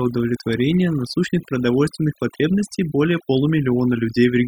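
Overdone noise removal runs through the whole speech clip. A noise reduction stage set too hard keeps pulling individual frequency bands down or out whenever they sit close to its noise estimate. The background drops and breaks up into twinkling specks, while quieter parts of the voice get stripped away too.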